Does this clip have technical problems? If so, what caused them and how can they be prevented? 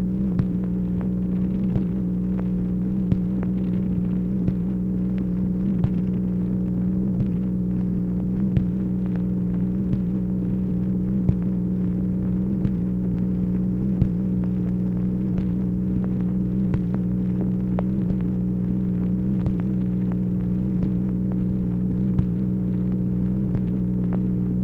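Yes. An underrun with held sample occurs at 13.14 s. The output buffer ran dry for about 2.3 ms, and during that gap the converter kept holding the last sample value, so the waveform flattens briefly rather than dropping to zero. Essentially no audio was lost. Playback picks up where it left off, so the tiny stall ends softly, with only a faint discontinuity. Larger output buffers and giving the audio thread priority over other processing would prevent this.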